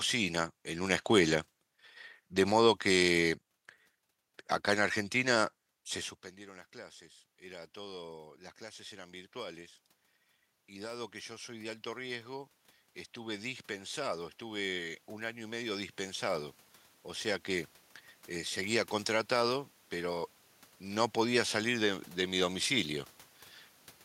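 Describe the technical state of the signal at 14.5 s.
At 14.5 s the voice and the room noise behind it are swelling together, the noise floor climbing along with the speech. This is automatic gain rising, running from 6.37 s to 23.03 s: after the talker moved back around 6.0 s and the input fell by about 22 dB, the gain control steadily added about 21 dB to compensate.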